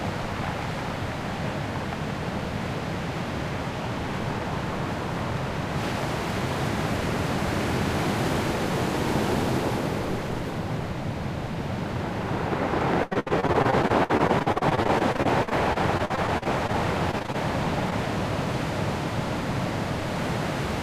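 A recording of everyday sound in which packets repeatedly failed to arrive in time between 13.03 and 16.75 s, giving repeated packet loss with a robotic sound. The receiver patched each hole by extending the preceding audio, with gaps up to 76 ms and about a quarter of the stretch synthesized, so the sound turns choppy with fragments missing. A shorter burst of the same fault at 17.11 to 17.36 s, with gaps up to 21 ms and roughly a third concealed, briefly repeats that stuttering texture. Then at 17.90 to 17.93 s one short concealed packet loss occurs: about 20 ms of audio never reached the decoder, and the patch continuing the last sound before blending back leaves a quick smear or wobble.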